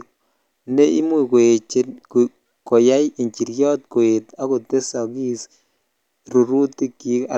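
No technical fault can be heard anywhere in this speech recording, and the signal stays intact and continuous over its whole duration.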